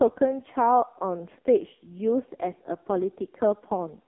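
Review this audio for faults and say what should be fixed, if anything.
Throughout the speech, the AMR narrowband mobile codec has done heavy damage. Nothing reaches above about 3.6 kHz, and the lows thin out below roughly 250 Hz, giving the narrow telephone band. The voice also sounds buzzy and synthetic, which points to a low AMR-NB mode near 5.15 kbps. Here the voice is rebuilt by a vocal tract model driven by a pitch predictor and a handful of pulses per 5 ms, not carried as a waveform. A plain band-limiting filter would narrow the sound but leave it natural rather than buzzy. Capture or transmit over a wideband path so speech never passes through a low-rate narrowband codec.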